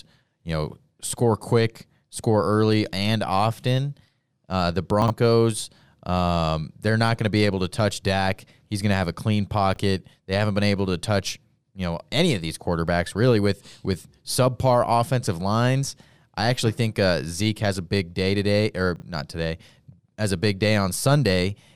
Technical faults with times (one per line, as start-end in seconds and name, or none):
5.02-5.10 chunks out of order
9.74-9.78 chunks out of order
18.96-19.02 chunks out of order